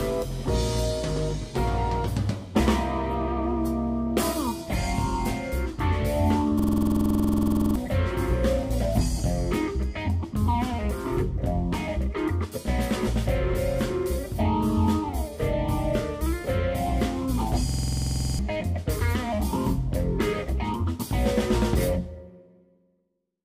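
The computer or audio driver stalled twice while the playback hardware kept replaying the same block of memory, producing a system hang loop from 6.60 to 7.76 s and again from 17.69 to 18.39 s. Each time, a 46 ms fragment repeats exactly, 25 times and then 15, which fits a 2048-sample buffer. At 21.5 repeats per second, this gives a rapid mechanical stutter in place of roughly a second and then about 0.7 s of real audio.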